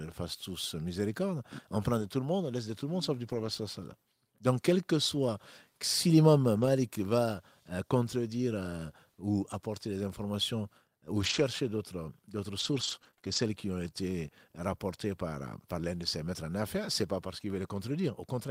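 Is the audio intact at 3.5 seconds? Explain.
No, not quite: 3.5 s falls at the tail of a lost packet rebuilt from error correction, running from 3.27 to 3.49 s, between "le monde sauf du" and "وسلم donc quel que". About 120 ms of audio, which fits six lost packets, was replaced by the low-bitrate copies carried in the following packets. There is no gap, but the stretch sounds rougher and noisier. Unlike plain loss concealment, it doesn't smear or buzz into a synthetic tone.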